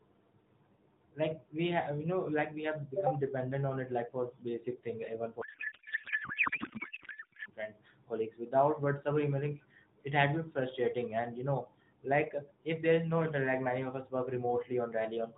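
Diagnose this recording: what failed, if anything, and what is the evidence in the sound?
Codec payload misread at the codec stage, 5.42 to 7.49 s. The speech turns into garbled warble. This fits octet-aligned AMR frames being unpacked as bandwidth-efficient.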